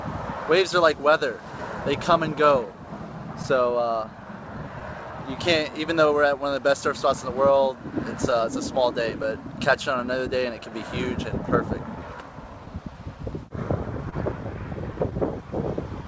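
What you've got here is audio that came through a call link with the sender's clock running slow, about 2% behind the receiver. That's classic clock drift between sender and receiver. Because the incoming stream can't keep pace, the jitter buffer keeps running low, and the receiver has to stretch things to avoid going dry.

The fix-ups show up as repeated timing corrections from about 1.10 s right to 16.04 s. The receiver is playing things back at roughly 99% speed, padding out a fifth of a second or so in total. The padding comes in small, unevenly spaced bits, so the pace drags and wobbles a little rather than jumping anywhere obvious.

On top of that there are scattered short gaps between about 8.31 s and 15.14 s, around seven of them, none longer than about 20 ms. The receiver filled each hole by carrying the last bit of sound forward, roughly 70 ms patched altogether, which is about 1% of that stretch. 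Nothing drops out completely, but you get brief ticks and little smeared hiccups.

The call path itself tops out at 8 kHz, which fits G.722 wideband coding, so everything sits under that ceiling.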